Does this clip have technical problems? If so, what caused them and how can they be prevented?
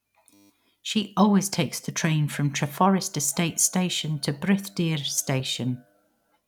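Yes. System hang loop from 0.34 to 0.50 s: the playback path stalled while the sound hardware kept replaying the same short stretch of its ring buffer. A 10 ms piece of speech repeats exactly 16 times, which at a loop rate of 100 Hz comes across as a steady buzz. Because so short a segment was cycling, it fuses into a tone rather than a stutter, and speech resumes from where it froze, with essentially nothing lost. To prevent it, find and fix the driver or system stall, and keep the audio thread at real-time priority so one blocked process cannot freeze output.

Underrun with held sample at 5.40 s: the output buffer briefly ran dry, and the converter held its last value for about 0.86 ms until data arrived again. The waveform goes flat for that instant instead of dropping out, so there is little or no click. Since playback continued where it left off, with essentially no audio lost, the join back into speech is soft. 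To prevent it, use a larger output buffer or feed it more promptly so it never empties.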